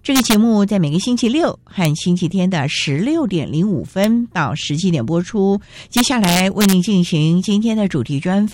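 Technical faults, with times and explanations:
0.16–0.34 s, 1.85 s, 4.04 s, 5.97–6.73 s: integer overflow. Speech peaks pushed up to about 1 dB past full scale wrap to the opposite sign instead of limiting, producing harsh cracks far sharper than clipping.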